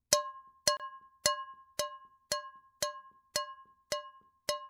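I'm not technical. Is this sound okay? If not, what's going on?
No. At 0.77 to 0.80 s there is a gap at a join of encoded pieces: the sound drops out for about 28 milliseconds, then resumes exactly where it stopped. Two separately encoded pieces were joined without trimming the silent padding each encoder adds.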